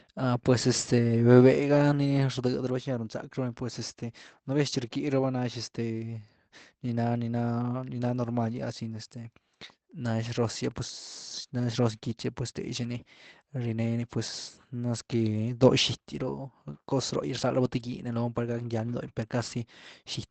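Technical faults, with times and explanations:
16.15–16.29 s, 17.83–17.89 s and 19.05–19.11 s, lost packet rebuilt from error correction: 80 ms, then 40 ms twice, played from low-bitrate backup copies carried in later packets. The sound never drops out but turns briefly rougher and noisier.
19.13–19.17 s, short concealed packet loss: about 20 ms arrived too late, so the decoder stretched the preceding sound to cover the hole before blending back into the real audio. This is heard as a brief smear or wobble.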